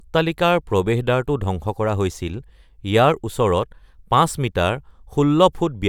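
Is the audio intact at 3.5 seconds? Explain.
Yes, the speech at 3.5 seconds plays through cleanly, with no dropout, click, distortion or other fault at that moment.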